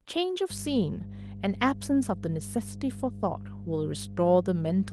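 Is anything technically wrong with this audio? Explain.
Yes, there's mains hum from about 0.5 s to the end: a steady 50 Hz drone, fairly loud at roughly 10 dB under the speech, from power-line coupling like a ground loop.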